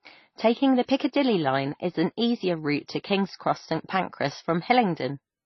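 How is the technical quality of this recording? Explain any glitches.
The technical quality is poor throughout, with a dull top end and layered compression artefacts. Nothing reaches above about 5.9 kHz, and the speech carries a mix of different compression artefacts heard at once, which likely comes from transcoding between lossy codecs, as if an MP3 were re-encoded to HE-AAC and then to AAC. Each stage encodes the previous stage's damage and adds its own, and the lowest cut-off survives. A single low-bitrate encode would show one consistent artefact character, not several overlapping ones.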